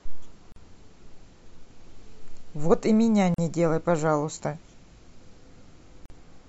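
At 0.52, 3.34 and 6.06 s the speech drops into short silences of about 42, 41 and 45 ms, each a gap at a join of encoded pieces. The audio was evidently encoded in separate segments and spliced without trimming, so the encoder's start-up delay and final-frame padding survive at each boundary. Each dropout has smeared edges, and the speech resumes exactly where it broke off, with nothing missing.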